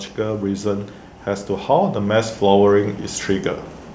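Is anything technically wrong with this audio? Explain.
Yes. From 0.17 s to about 3.57 s there's automatic gain rising: the call's gain control decided the input was too quiet and kept pushing its gain up, by about 6 dB in total over those three-odd seconds. Because it's a slow, steady climb rather than a jump, the speech and the room noise behind it swell together. Over that stretch the clip gets gradually louder instead of holding a steady level. The band tops out at 8 kHz, as expected from the call microphone processing.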